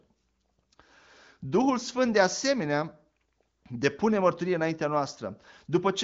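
No technical faults are audible.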